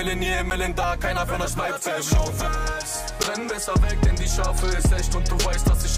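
A block of digital silence occurs at 0.5 s and again at 3.23 s. Each time, 10 ms of audio cuts out with no fade, so the sound snaps off and straight back, leaving a short tick rather than an audible gap.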